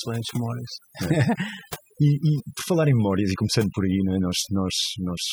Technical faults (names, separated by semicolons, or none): overdone noise removal